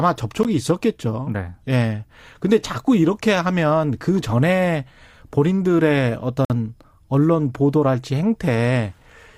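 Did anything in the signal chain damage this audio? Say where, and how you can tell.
Yes. There is a gap between stream segments at the playback stage. Segment timestamps leave two holes roughly 6 seconds apart, at 0.43 s and from 6.45 to 6.50 s. The player fills each with hard-edged silence of about 15 ms and 51 ms, interrupting the speech without losing any of it.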